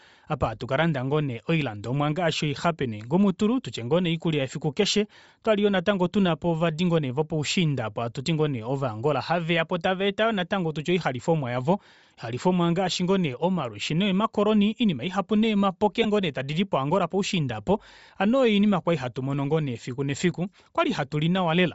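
Throughout the speech, a low-rate transform codec, likely Bluetooth LC3 compression, has zeroed much of the upper spectrum and filled it with noise. Consonants and vowels gain a plainly audible breathy, grainy edge, consistent with roughly 32 kbps and 7.5 ms frames.

From 16.03 to 16.06 s, just before "tadidi poangola poushiinda hano", lost LE Audio frames were covered by the decoder repeating the last spectrum with scrambled signs. The gap fits two 7.5 ms frames and sounds like a brief noisy smear.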